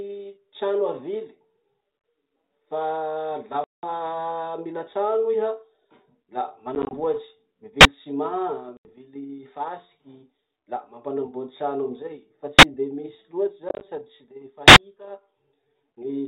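A speech recording carried over a G.726 ADPCM link, whose 32 kbit/s coding keeps everything below 4 kHz, is interrupted by packet loss on an ADPCM call four times. The worst is at 3.64 to 3.89 s, where about 190 ms, around twenty packets, drops to a hard-edged silence. Shorter losses follow at 6.75 to 6.93 s (60 ms scattered over 160 ms, longest run 20 ms), 8.77 to 8.94 s (80 ms) and 13.69 to 13.82 s (80 ms scattered over 120 ms, longest run 30 ms). Because ADPCM sends only differences from an adaptive prediction, each gap leaves the receiver's predictor and step size out of step with the sender's, so the speech comes back at the wrong level or with a click and distortion before settling within some tens of milliseconds. Three further events are invalid numbers at full scale, where a calculation produced infinite or invalid values that were pinned to the maximum sample value for a whole processing block. 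The two 43 ms blocks, at 7.81 to 7.85 s and 12.59 to 12.63 s, fit a 2048-sample block and are short enough to land as a single loud bang. The 85 ms block at 14.68 to 14.76 s fits a 4096-sample block and is heard as a sharp pop at each edge with no sound between.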